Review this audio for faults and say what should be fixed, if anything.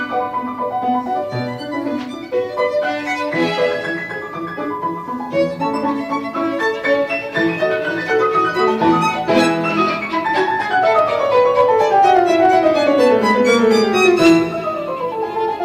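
Hard clipping occurs from 10.97 to 10.99 s at about 3 dB over, then from 11.35 to 14.37 s at about 6 dB over. Peaks are sliced flat, adding high harmonics, unlike a limiter's smooth squash. Reducing gain before the overloading stage prevents it.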